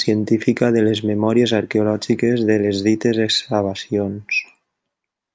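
No dropouts, clicks, distortion or other transmission faults can be heard anywhere in the recording.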